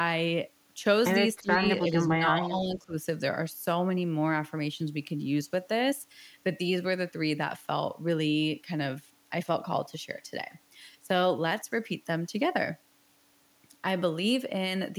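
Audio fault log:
1.42–1.62 s, speech suppressed in double talk: the speech dips by roughly 15 dB in brief pieces, likely an echo canceller ducking the talker while the far side also spoke.
1.83–2.95 s, speech suppressed in double talk: a longer, shallower dip of about 10 dB, likely the canceller mistaking overlapping talk for echo, cuts parts of the speech for most of this stretch.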